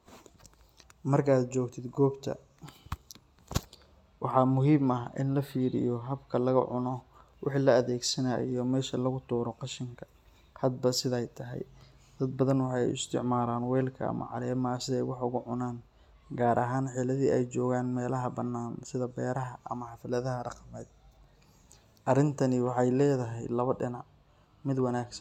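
Nothing in the recording stood out as a technical problem on listening.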